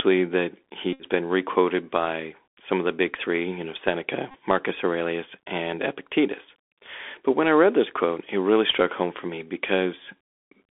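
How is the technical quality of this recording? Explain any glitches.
Quality is limited by a narrowband Bluetooth headset link, with two short dropouts.

Bluetooth CVSD headset codec, throughout: the band runs roughly 300 Hz to 3.5 kHz. One-bit up-or-down steps at 64 kbps plainly roughen the sound and add grainy hiss.

Bluetooth headset packet repeated, 0.93 to 1.03 s (just before "been requoted by some") and 4.31 to 4.35 s: lost packets were replaced by replaying the last one. The repeat every 3.75 ms makes a buzz near 267 Hz.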